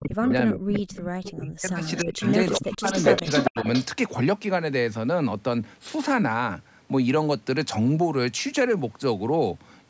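From the start to 0.88 s the speech drops away in pieces, falling by as much as around 40 dB over roughly 0.7 s of that stretch. It does so again from 1.36 to 2.22 s, for about 0.7 s, then from 2.6 to 2.84 s and from 3.23 to 3.65 s. This is speech suppressed in double talk. Sound from the other end was likely playing on a loudspeaker while this talker spoke, and the echo canceller could not tell the two apart, so it turned both down.

Around these dips, a delayed copy of the voice returns 399 ms late. It is a brief scrap at 0.29 to 0.33 s, then a longer run from 0.9 to 1.33 s, both sitting about 15 dB below the speech. From 1.84 to 3.85 s it comes back roughly as loud as the speech itself. This is echo leak: the loudspeaker side's echo canceller likely failed to remove everything its microphone picked up, and the remainder was sent back down the call.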